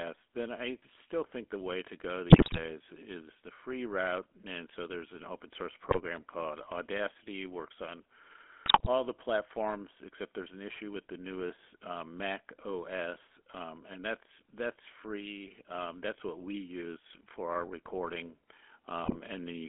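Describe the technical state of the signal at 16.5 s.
At 16.5 s the speech carries GSM full-rate codec damage, present across the whole clip. The codec models the vocal tract as a filter and drives it with a sparse train of regularly spaced pulses, keeping only every third excitation sample. The damage is plainly audible as a buzzy, gravelly roughness. The band is confined to about 250 Hz to 3.4 kHz, giving a thin telephone sound. The codec runs at 13 kbps.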